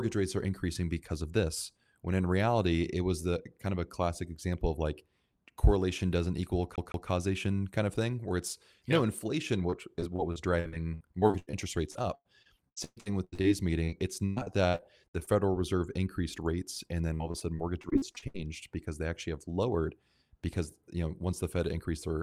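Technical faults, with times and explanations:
6.76–7.08 s, CD stuck on one turn: right after "like correlation doesn't equal", a 0.16 s piece of speech repeats twice with a brief mute at each jump, a quick, even stutter before "kind of thing where", as if a scratch kept throwing the pickup back one track.
9.70–11.55, 11.91–13.46, 13.84–15.28 and 17.14–18.36 s, repeated packet loss (robotic sound): starting after "where it's no inflation" and again after "increased rates and then", roughly ten to twelve dropouts per stretch, up to 120 ms long, are patched by extending the previous sound. This conceals 21–37% of each stretch and makes the speech choppy.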